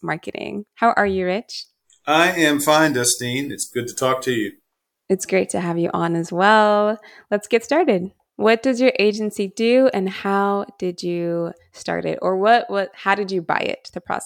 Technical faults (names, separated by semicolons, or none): none